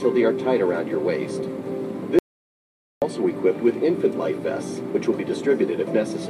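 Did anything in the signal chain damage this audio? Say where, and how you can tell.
Yes. An audio dropout to silence runs from 2.19 to 3.02 s, losing 0.83 s of sound. It cuts off and resumes abruptly with no room tone in the gap, unlike a gate's fade. The input was likely lost upstream while the recorder kept writing silence.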